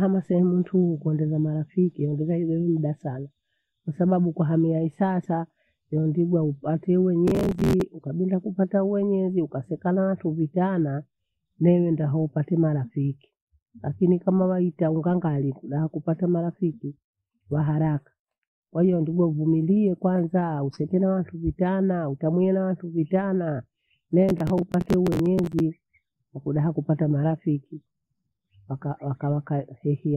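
Processor overload crackle appears twice in the speech. From 7.28 to 7.81 s, between "kwahamia hesasa ewondingwa upate" and "ukabinda kupata mwenyezi ukaseka", a gritty tearing rides on the sound. It returns, longer, from 24.29 to 25.6 s. The processor is missing its buffer deadlines repeatedly, and each miss replays a short slice of old audio with hard edges. The grain of the crackle suggests buffers of around 10 ms, with about 20 misses in the first burst and more in the second.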